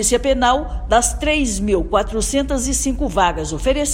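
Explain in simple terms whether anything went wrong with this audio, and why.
Listening closely, nothing in this audio stood out as having gone wrong.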